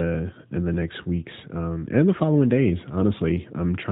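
No technical faults are audible.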